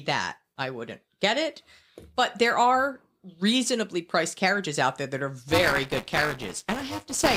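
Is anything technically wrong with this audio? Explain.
Yes. From 5.48 s to the end at 7.36 s, buffer tearing: writer and reader cross each period, splicing a small slice of audio about 15 ms old into each buffer. It sounds like a robotic 200 Hz rattle, shows as 5 ms-spaced waveform discontinuities, and appears as vertical spectrogram striping.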